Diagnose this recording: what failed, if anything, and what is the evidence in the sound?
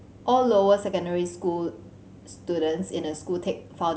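Nothing failed; no audible fault at any stage.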